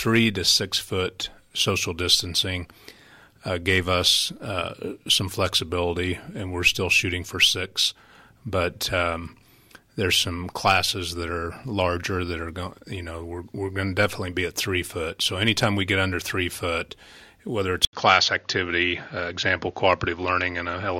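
At 17.85 s there's a short gap, about 80 ms of silence, and from there to the end the sound goes dull and boxy, with nothing above roughly 6.9 kHz. That's most likely the input switched to a poorer device, such as another mic or a headset's call profile, with a narrower band and its own tone. The level stays about the same, but a faint new background noise comes in well under the signal.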